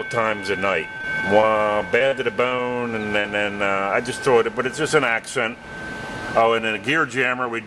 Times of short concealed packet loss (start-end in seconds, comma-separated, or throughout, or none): 3.20-3.26